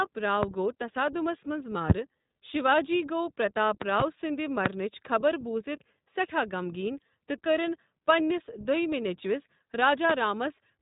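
Speech runs the whole way through the iLBC codec at 15.2 kbps with 20 ms frames. Nothing above 4 kHz survives, and the voice has a rough, slightly synthetic grain. That grain sets it apart from a simple low-pass filter, because each frame's excitation is coded on its own. Loud pops land at 0.43–0.46 s, 1.90–1.93 s, 4.66–4.69 s (just before "خبر بوٗزِتھ سٮ۪ٹھاہ غمگیٖن") and 10.10–10.13 s. A double pop spans 3.82–4.03 s, right after "شیواجی گوٚو". They peak roughly 15 to 25 dB above the speech, likely from a voltage step such as a plug, switch or static discharge. Unlike dropouts or clipping, the speech carries on unbroken beneath each pop.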